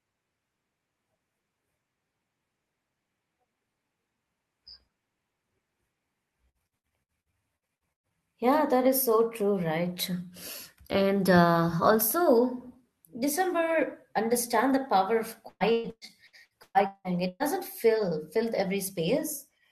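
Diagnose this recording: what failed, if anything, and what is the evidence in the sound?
The network stage failed, with repeated packet loss (robotic sound) in two bursts. From 6.49 to 8.13 s there are 12 short holes, the longest 110 ms, and about a third of that stretch is concealed. Right after "understand the power of", from 15.48 to 17.54 s, 9 longer holes (up to 179 ms) conceal nearly half the span. The receiver extends the last good sound across each missing piece, giving choppy speech with pieces missing.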